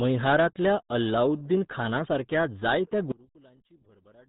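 RealAudio 14.4 codec damage runs through the whole speech recording: nothing above 3.9 kHz survives, and the heavy coding at 8 kbit/s leaves the speech muffled and gargly, because this dial-up era codec keeps only a coarse model of the narrowband signal. One channel inverted is the likely cause of what happens from 3.12 s to 4.29 s, just after "मैहारांतल्या अलाउद्दीनखानासारक्या जायत्या": the sound falls by about 29 dB and turns faint, as the shared centre content cancels when the channels are summed and only their small difference remains.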